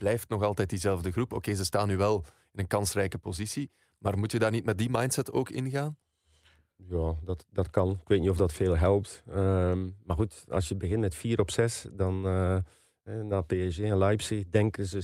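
No technical faults can be heard anywhere here.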